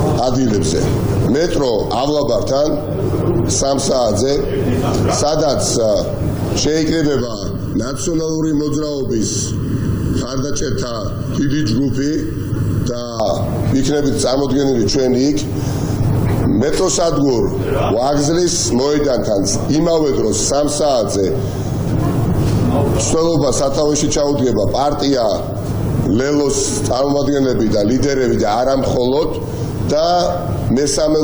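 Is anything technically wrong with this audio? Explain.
Yes. From 7.20 to 13.20 s there is channel delay (comb filtering): one channel runs late by under a millisecond, and summing to mono cancels evenly spaced frequencies starting near 700 Hz. The sound turns hollow and phasey. Unlike flanging, these notches stay fixed and never sweep.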